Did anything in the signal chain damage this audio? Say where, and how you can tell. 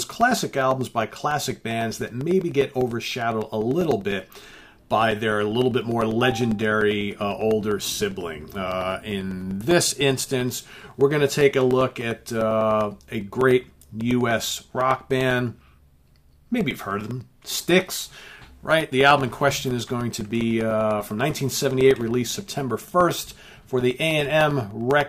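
Yes. From 0.11 s to 25.01 s a steady tick sounds every 0.1 s, ten per second. These are periodic USB or driver dropouts: something stalls the driver or bus on a fixed schedule, and each stall leaves a gap of roughly two milliseconds of silence.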